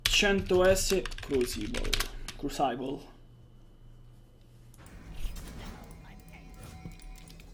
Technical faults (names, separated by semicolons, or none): wrong sample rate